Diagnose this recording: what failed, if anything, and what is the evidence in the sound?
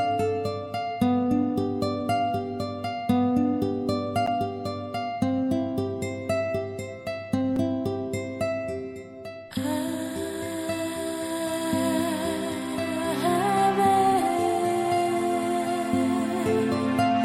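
At the driver or buffer stage, the program likely failed to fill its output buffer in time, and the missing blocks went out as zeros. The result is two blocks of digital silence, at 4.26 s and at 7.56 s. They last about 10.7 ms and 5.3 ms, which fits a 512-sample block and a 256-sample block. The sound drops straight to silence and back with no fade, so each gap is heard as a short tick.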